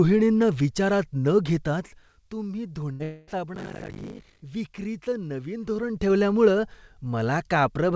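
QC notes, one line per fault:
2.92–3.01 s, burst of packet loss. A short run of audio failed to arrive, about 80 ms in all. The receiver filled roughly 75 ms by carrying the last sound forward and letting it fade. That is why a brief held buzz or hiss sits where the speech should be. The speech then picks up a little further along. The stretch in between is simply gone, so the join sounds clipped rather than paused.
3.03–3.29 s, long network dropout. Right after the first gap, the sound breaks off for about 240 ms. The cause is likely a longer network outage rather than a few lost packets. Concealment covers the whole gap with a continued buzz or hiss that thins and fades. It never falls to full silence. When speech returns, the missing quarter second is not recovered. What was said in that span is skipped entirely.
3.54–4.44 s, buffer tearing, ending just before "विक्रीचं नवीन". A steady robotic rattle runs through this stretch at 50 Hz. 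The writing and reading sides of the playback buffer have drifted and cross each period. About half of each buffer replays audio from roughly 70 ms earlier. Hard joins on both sides give the buzz. The 50 Hz rate fits a 20 ms buffer period. The rattle appears only while speech is present.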